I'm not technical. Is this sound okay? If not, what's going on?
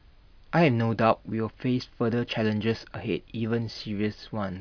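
Yes, this sound is okay; nothing is going wrong with it.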